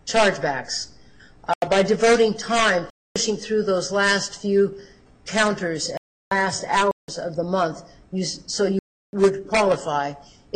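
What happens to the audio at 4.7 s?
Nothing goes wrong at 4.7 s; the audio plays through that moment intact, with no dropout, click, glitch or other fault.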